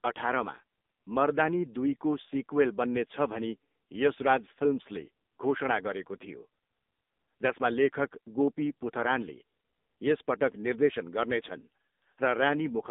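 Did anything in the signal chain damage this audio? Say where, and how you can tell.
Yes, at the codec stage: AMR narrowband mobile codec damage runs through the whole speech clip. Nothing passes above 3.8 kHz, and the 200 Hz to 3.7 kHz band shows heavy buzzy, synthetic coloration, which fits a low mode near 6.7 kbps. A plain telephone filter would narrow the band without this pulse-driven vocal-tract texture.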